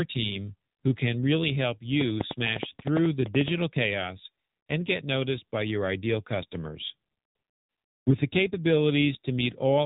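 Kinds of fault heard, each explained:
AMR narrowband mobile codec: The speech has passed through the narrowband mobile codec, which rebuilds the voice from a vocal-tract model excited by sparse pulses. The damage is plainly audible: a buzzy, synthetic edge that fits one of the lower AMR-NB modes, around 7.4 kbps. On a spectrogram everything stops at a hard ceiling near 3.8 kHz with an empty band above. The harmonics below look smeared and grainy, and the waveform's fine detail is simplified.
train of clicks: From 2.01 to 3.49 s a burst of sharp, similar-shaped clicks ticks over the speech, roughly fifteen of them at an uneven pace averaging about 8.9 per second. They are most likely interference from nearby equipment. Each click stands well above the surrounding signal, roughly 20 dB at its peak. The waveform shows them as thin isolated spikes, and the spectrogram shows them as narrow vertical lines spanning the whole band at irregular gaps.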